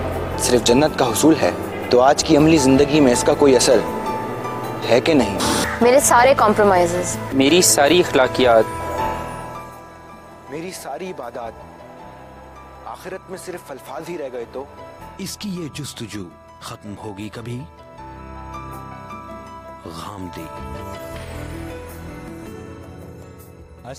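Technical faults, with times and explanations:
No technical faults can be heard anywhere here.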